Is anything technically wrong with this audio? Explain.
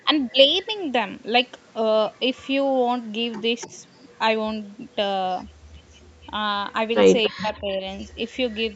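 Yes. Two related call faults are present.

Echo leak occurs at 3.61–4.18 s, 5.33–5.43 s, 6.04–6.27 s and 7.23–8.07 s. A faint copy of the speech trails it by 288 ms. The copy is barely audible mid-clip and most noticeable in the last stretch. It likely comes from a far-end echo canceller leaving loudspeaker pickup uncancelled.

Speech suppressed in double talk occurs at 3.67–3.73 s as a brief dip of about 10 dB. At 7.29–7.84 s the level drops much further, by up to about 30 dB. The cause is likely the echo canceller ducking the talker while the echo overlaps.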